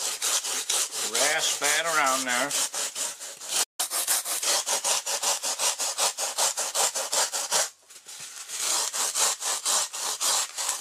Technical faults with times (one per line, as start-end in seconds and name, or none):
3.63-3.80 playback stall
3.80-4.43 catch-up at higher speed